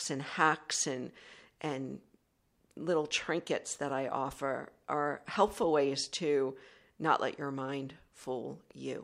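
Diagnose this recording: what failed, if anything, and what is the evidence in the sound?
Nothing failed in this recording, and the sound carries no evidence of a fault at any stage.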